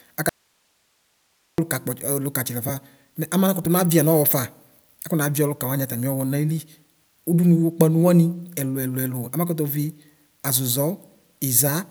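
From 0.29 s to 1.58 s the speech drops out for about 1.3 seconds, leaving only faint hiss around 45 dB below the normal level. It's an audio dropout to a faint residue, likely the signal breaking while the path downstream stayed live, so the cut is abrupt, not a fade.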